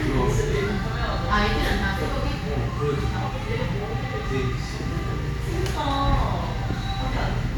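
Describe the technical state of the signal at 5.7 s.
At 5.7 s the signal is intact, with no audible fault of any kind at that moment.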